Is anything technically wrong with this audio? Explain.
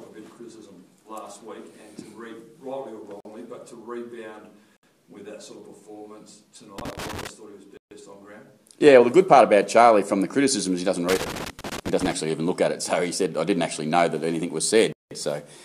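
Yes. There are blocks of digital silence at 3.20–3.25 s (about 46 ms), 4.77–4.83 s (63 ms), 7.77–7.91 s (139 ms) and 14.92–15.11 s (186 ms). The sound cuts out abruptly and comes back with no fade. The first and last gaps fit buffers of 2048 and 8192 samples that went unfilled in time. Each gap is a short hole, unlike crackle.

Loose connector crackle appears at 6.78–7.29 s and 11.09–12.12 s. A poor contact makes and breaks rapidly, chopping the signal, so it comes through as an irregular, scratchy burst lasting half a second to a second. This ragged texture sets it apart from the silent blocks' single gap.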